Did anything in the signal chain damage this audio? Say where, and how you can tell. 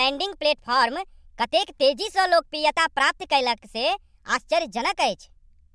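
Yes. At playback, a wrong sample rate: the samples were clocked out faster than recorded, with no conversion, so the speech throughout runs 1.38 times too fast and about 5.6 semitones high, sounding hurried and chipmunk-like. That ratio fits 16 kHz audio played at 22 kHz.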